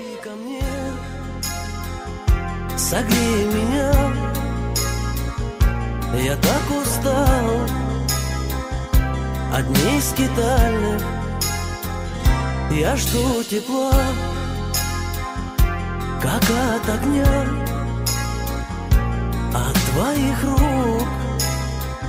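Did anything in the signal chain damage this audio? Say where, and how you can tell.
No, nothing in the chain audibly damaged this audio.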